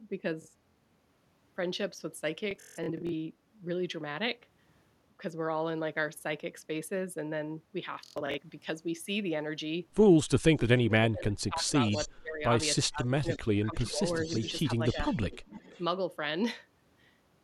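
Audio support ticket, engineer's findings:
Bluetooth stutter at 0.42–0.76 s, 2.51–3.12 s and 7.94–8.38 s: machine-gun repeats of short speech slices. The receiver replays its last buffer while packets are lost or late. The longest runs are 46 ms, 162 ms and 93 ms, which fits frames of about 23 ms.

Speech suppressed in double talk at 10.66–11.73 s, 12.07–12.43 s, 12.85–14.03 s and 14.77–14.97 s: the voice dips or cuts out in pieces, by about 35, 20, 25 and 5 dB. Likely the echo canceller attenuating both sides during overlapping talk.

Echo leak at 11.88–12.08 s, 13.29–13.39 s, 14.13–14.52 s and 14.86–15.82 s: a delayed copy of the voice arrives about 0.33 s late, about 15 to 25 dB below the direct speech. Likely loudspeaker pickup at one end that the echo canceller does not fully remove.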